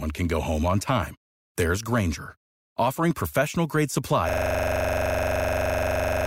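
At 4.29 s the speech locks into a system hang loop that runs to the end. A 42.67 ms slice, which fits a 2048-sample buffer, repeats exactly at 23.4 Hz.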